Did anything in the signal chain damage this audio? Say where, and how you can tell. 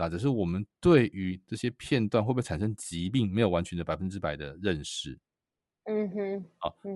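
Yes. Throughout the speech there is a plainly audible breathy, grainy edge in the upper band. It is likely Bluetooth LC3 compression at the codec stage: short transform frames, fitting 7.5 ms and a bitrate near 48 kbps, discard high-frequency detail and fill it with noise.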